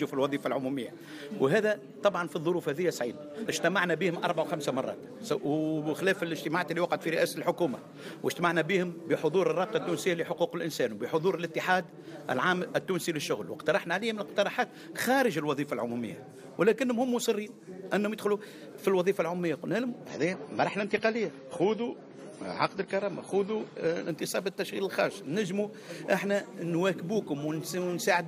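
From 20.09 to 24.09 s an adaptive stream at a lower bitrate cuts treble above 11.5 kHz and adds swirly artefacts, with abrupt, gapless switches unlike a dropout.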